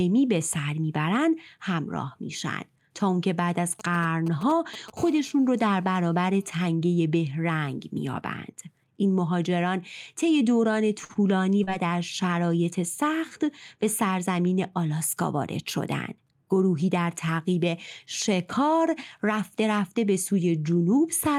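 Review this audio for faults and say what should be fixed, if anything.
GSM signalling bursts, 3.79 to 4.98 s: a nearby 2G phone sends short groups of radio bursts, and the audio circuitry rectifies them into a galloping pattern of ticks and brief 217 Hz buzzes, roughly 15 dB below the speech. Keeping phones away from the recording chain and using shielded, well-grounded cabling would prevent it.

GSM phone buzz, 4.98 to 6.48 s: the same phone then transmits continuously at 217 bursts per second, and the rectified pulses become a steady, raspy 217 Hz buzz rich in harmonics, about 27 dB below the speech. The same distance and shielding measures would stop it.

Short stall from a late packet, 11.04 to 11.12 s and again 11.13 to 11.18 s: packets arrived late, the jitter buffer ran dry, and the receiver stretched the last sound for 51 ms and then 18 ms before resuming where it left off, so nothing is lost. 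A deeper or adaptive jitter buffer would absorb this.

Short concealed packet loss, 11.63 to 11.70 s: 40 ms of audio never reached the decoder in time, and the receiver filled the gap by extending the preceding sound before blending back, leaving a brief smear. Forward error correction or a more stable network path would reduce it.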